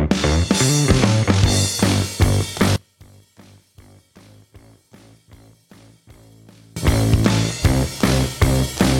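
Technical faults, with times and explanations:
2.76–6.76 s, one channel inverted: the sound drops by about 30 dB, likely from reversed polarity cancelling shared content; waveform and spectrogram nearly empty there.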